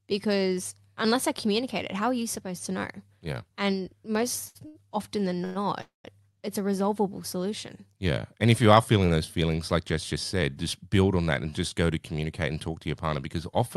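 At 4.47 s and again at 4.67 s, just before "often than", two short stalls from a late packet hold the current sound for about 75 ms each. Nothing drops out, which sets them apart from packet loss. At 5.45 s, right after "often than" and before "it's a resolvable solution", a call audio freeze continues the last sound as a fading buzz for about 110 ms, likely because packets were held up and the jitter buffer ran dry. A second freeze follows at 5.81 s and lasts about 230 ms, ending in roughly 150 ms of silence. These freezes last longer than the stalls and fade instead of just holding the sound.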